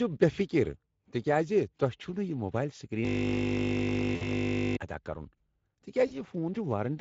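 Speex codec damage runs through the whole recording. This low-bitrate CELP speech coder has too few bits to describe the excitation, so the speech sounds plainly hoarse and noisy. The coarseness points to a setting near 16.8 kbps.

A system hang loop runs from 3.05 to 4.77 s. A frozen system left the audio hardware replaying one 20 ms stretch of its buffer, repeated about 86 times. That produces a steady 50 Hz buzz until the speech returns with "ادا کرُن".

VoIP packet loss concealed by the speech codec occurs at 4.15 to 4.29 s, about 60 ms inside the looping stretch, and again at 6.07 to 6.14 s, about 40 ms. Both fit lost 20 ms frames. The decoder extended its last pitch and filter while lowering the gain, so each gap becomes a fading buzzy or noisy smear, and the speech stays weakened briefly afterwards.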